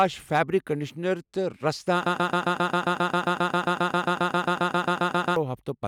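At 2.06 s the speech locks into a broken-record loop: a 134 ms fragment repeats exactly, back to back, 25 times until 5.36 s, giving a rapid stutter with a repeat rate of about 7.5 per second. The player or stream likely stalled and kept replaying the last piece it held, so the speech due in those seconds is gone. A spectrogram shows one identical block tiled end to end; the waveform shows the same shape repeating.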